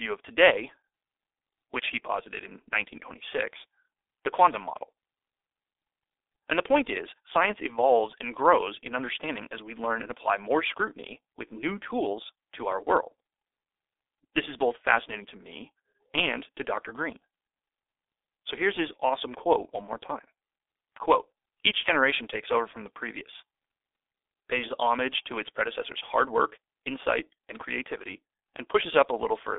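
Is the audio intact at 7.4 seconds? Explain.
No. At 7.4 s the sound carries G.723.1 codec damage, present throughout the clip. The low-rate coder, consistent with about 6.3 kbit/s, rebuilds the speech from a slowly updated voice model in 30 ms frames and discards everything above 3.8 kHz, leaving heavy muffling, hoarseness and smeared consonants.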